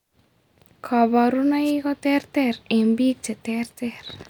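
At 1.64 to 1.72 s the radio link from an analogue FM wireless microphone fades as reflected signals cancel at the receiver, letting receiver noise rise over the speech. The result is a wireless microphone noise hit: a brief swish of static lasting about 80 ms.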